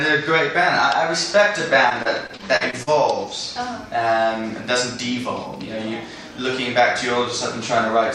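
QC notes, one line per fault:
1.89–2.89 s, repeated packet loss (robotic sound): over this one-second stretch the audio breaks up into what sounds like eight short holes, none longer than about 40 ms and totalling roughly 200 ms, about a fifth of the span. Each hole is papered over by stretching the last received sound forward, and the next loss arrives before the stream settles, so the passage turns choppy, with small pieces of the sound missing.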